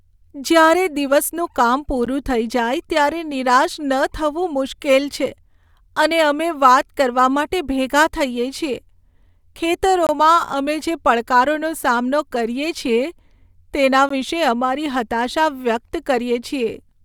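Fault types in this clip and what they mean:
gap between stream segments: three short, hard-edged silences of 13 to 23 ms fall on 2-second segment boundaries, where timestamps leave a hole the player fills with silence.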